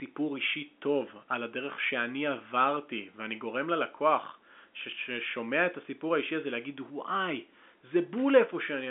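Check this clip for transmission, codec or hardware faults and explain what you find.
No transmission, codec or hardware faults can be heard.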